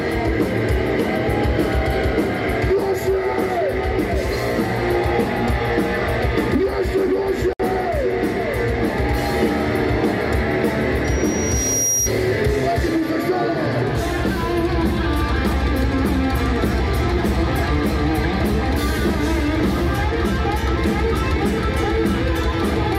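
A gap at a join of encoded pieces opens from 7.53 to 7.60 s: about 64 ms of silence cuts into otherwise continuous sound, then the audio resumes exactly where it left off. The segments on either side were encoded separately and butted together untrimmed, so the encoder's start-up delay and the padded final frame both remain as dead air. The gap's edges are smeared by the codec.

A loudspeaker feedback squeal follows from 11.04 to 12.12 s: a single tone at 5.7 kHz rises out of the sound, swelling over roughly 0.7 s until it sits at about the same level as the programme itself. A microphone was picking up the loudspeaker it was driving, and around 5.7 kHz the loop gain went above one, so that frequency kept feeding itself and grew.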